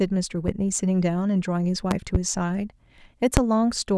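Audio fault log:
0.48–0.51 s, 1.91–2.18 s, 3.37–3.40 s: loud pop. Sharp pops, a double one in the middle, rise from about 10 to 20 dB above the speech, which continues underneath. Likely sudden voltage spikes from a plug, switch or static.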